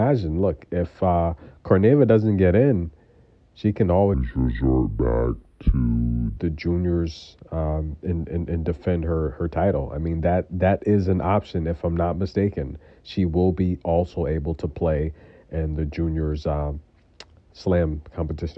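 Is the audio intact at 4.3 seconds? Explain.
No. From 4.14 to 6.37 s there is a wrong sample rate fault: samples are clocked out slower than they were captured, which fits 32 kHz audio played at 22 kHz. The sound runs at 0.69 times speed and drops about 6.5 semitones, dragging low and slow.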